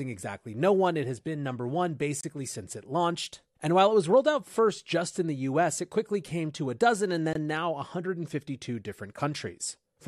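Separately encoded pieces were joined without trimming encoder delay and end padding, leaving a gap at each join of encoded pieces: a gap of about 26 ms at 2.21 s and 22 ms at 7.33 s, smeared edges, then the speech resumes where it stopped.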